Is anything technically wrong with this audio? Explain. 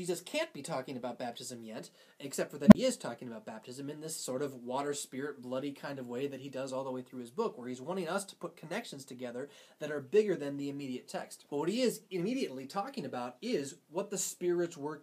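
Yes. From 2.66 to 2.75 s there is an unstable filter. A recursive filter's feedback runs away, so a tone around 200 Hz swells over about 55 ms into clipping, then overflows and cuts out for about 33 ms. The waveform shows a fast-widening oscillation ending in a flat gap. The spectrogram shows a bright low band, then a blank strip.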